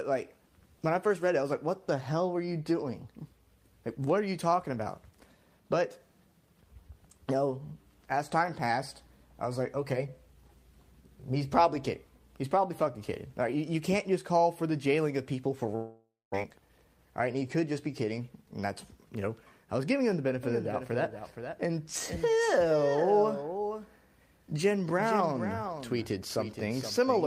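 The audio breaks up at 15.75 s in what sounds like a long network dropout: the last sound is stretched into a fading buzz and then goes silent for about a quarter second before audio resumes at 16.36 s with the missing stretch skipped, likely a burst of lost packets. From 16.43 to 18.47 s a jitter buffer speed-up follows; the receiver trims short pitch-period slices to run about 108% of normal speed at unchanged pitch, shedding roughly 150 ms of built-up delay, so the passage sounds hurried. From 20.43 s to the end a doubled audio track appears: a dry, full-band copy about 10 dB quieter trails by roughly half a second and starts abruptly, likely a second capture path mixed in out of step.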